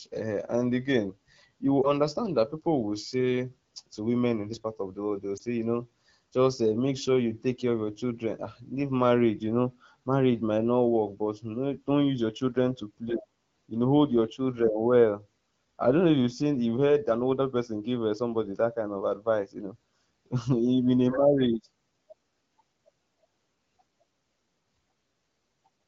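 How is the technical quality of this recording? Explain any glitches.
The recording is wideband telephone speech whose bandwidth and light coding texture fit AMR-WB (HD Voice) at around 12.65 kbit/s. It has two brief glitches.

Lost AMR speech frames occur at 1.82–1.91 s, after "um and again you" and before "understand that people will", and at 5.37–5.42 s, after "the world they will" and before "say you know just". Each is a single 20 ms frame that failed its checksum. The decoder filled it from the previous good frame's pitch and vocal-tract parameters at reduced gain, giving a short dip or warble before the speech recovers.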